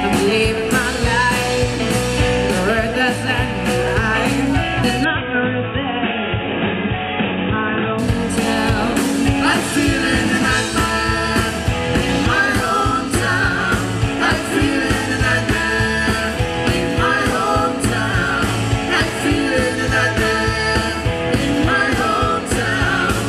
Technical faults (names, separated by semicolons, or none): input switched to a poorer device